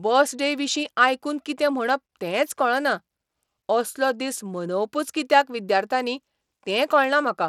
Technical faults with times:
0.00-7.48 Bluetooth SBC compression

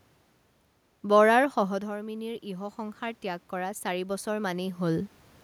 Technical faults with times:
1.55-5.18 automatic gain rising

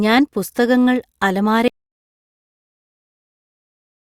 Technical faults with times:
1.68-4.01 audio dropout to silence

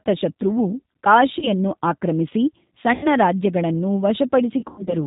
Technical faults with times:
0.00-5.07 G.729 codec
1.39-1.49 VoIP packet loss concealed by the speech codec
2.94-3.08 VoIP packet loss concealed by the speech codec
4.60-4.96 VoIP packet loss concealed by the speech codec

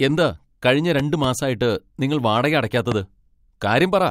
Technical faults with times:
1.00-1.27 loud pop
2.92-2.94 loud pop

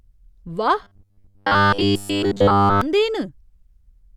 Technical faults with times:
0.83-2.81 robotic sound from repeated short buffers

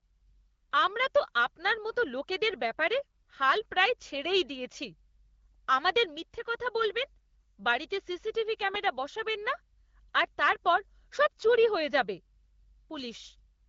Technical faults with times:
none

